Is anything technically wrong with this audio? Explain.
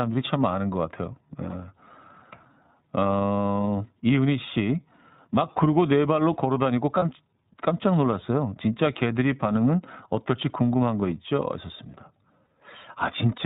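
Yes, two related problems. The whole clip runs through the iLBC codec, at a rate that fits its 13.33 kbps mode. Everything above 4 kHz is gone, and the speech comes out noticeably rough and a bit synthetic.

There are also lost iLBC frames at 6.99–7.03 s and 12.45–12.48 s, each about 30 ms, which suggests a single lost frame each time. The decoder fills each gap by repeating the last pitch cycle mixed with noise, so you hear a brief buzzy, held vowel. It recovers almost immediately.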